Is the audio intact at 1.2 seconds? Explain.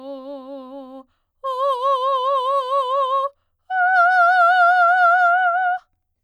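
Yes, the music at 1.2 seconds plays through intact, with no fault at that moment.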